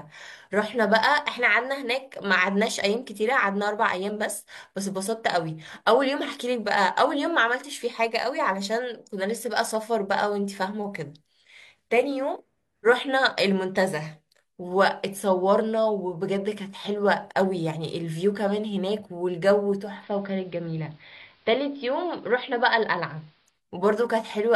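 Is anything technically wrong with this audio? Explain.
Yes. There is digital radio blending to analogue from 19.72 s to 23.62 s. The receiver lost the digital stream and cross-faded, over about 318 ms, to the station's AM broadcast, then back. AM's narrow channel cuts the treble, so the speech turns dull and boxy, the level drops by about 1 dB, and a faint hiss rises well below the speech until the digital signal returns.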